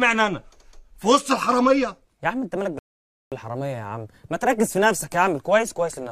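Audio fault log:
2.79–3.32 s, rebuffering stall: the playback just runs dry here, so the sound drops to silence for about 0.53 s and then picks up exactly where it left off. Nothing gets skipped or repeated, which is the tell that the player had used up its downloaded audio and sat waiting for more to arrive. The only cost is that half-second of dead air added to the timeline.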